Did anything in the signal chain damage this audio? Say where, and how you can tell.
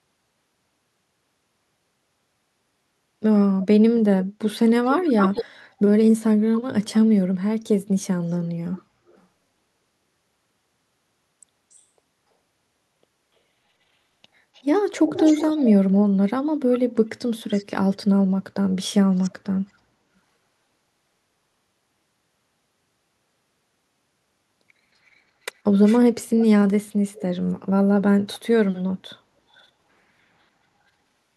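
Yes. An echo leak appears at 3.62–5.45, 8.31–9.2, 14.54–15.71, 16.75–17.96, 19.17–19.3, 25.84–27.22 and 29.53–29.67 s. A delayed copy trails the speech by 252 ms, drifting to 359 ms. It is strongest at first, only a few dB down, and mostly much fainter after that. This points to call processing, likely a far-end echo canceller passing loudspeaker pickup back.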